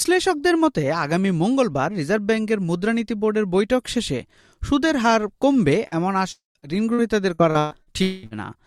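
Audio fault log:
5.87–5.94 s and 8.27–8.34 s, short concealed packet loss: each is a brief smear of about 40 ms where the sound stretches unnaturally before blending back. About 40 ms of audio arrived too late each time, and the receiver bridged it by extending the sound just before.
6.31–6.58 s and 8.02–8.26 s, long network dropout: the sound freezes into a fading continuation. At the first, about 0.14 s of silence follows before the audio resumes. The second, about 0.2 s, is bridged without silence. The likely cause is a stall of roughly 0.24 s and 0.2 s of incoming audio, which is now lost.
6.59–7.89 s, repeated packet loss (robotic sound): the sound turns choppy, with six separate holes. The longest is about 0.12 s. About 0.32 s in all never arrived, and continuing the preceding sound patched roughly a quarter of this stretch.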